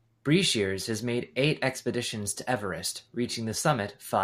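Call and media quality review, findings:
No audible faults found in this speech clip. Nothing to escalate for the call or media path.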